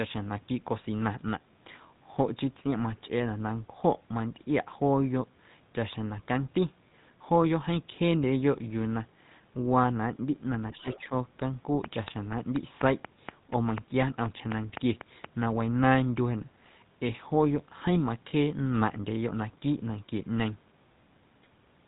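GSM full-rate codec, throughout: the speech has the gravelly, buzzy roughness of this early vocal-tract codec, which rebuilds the excitation from sparse, regularly spaced pulses. Nothing comes through above 3.8 kHz, and the plainly audible damage fits the 13 kbps full-rate scheme.

Speech suppressed in double talk, 10.73 to 10.87 s and 11.08 to 11.12 s: the voice briefly dips by about 10 dB. This is likely an echo canceller that could not tell this talker from the far side's echo and attenuated both.

Train of clicks, 11.84 to 15.26 s: about fifteen similar pops tick over the speech at a regular 4.1 per second, standing out about 15 dB above the signal and continuing through pauses. The likely source is repeated pulse injection, such as nearby interference or a faulty connection or power supply.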